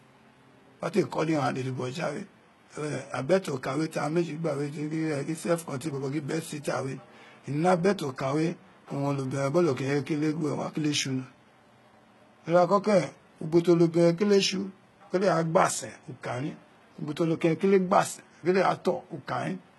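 From start to finish the speech has a bright but synthetic top end. Sibilants come out gritty and a little lisping, with a metallic sheen, and nothing at all sits above about 11.8 kHz. That points to heavy HE-AAC compression as the likely cause: the codec keeps the lower spectrum and rebuilds the treble by copying lower bands upward, so the upper harmonics don't line up. The amount of damage fits a very low bitrate of about 16 kbps.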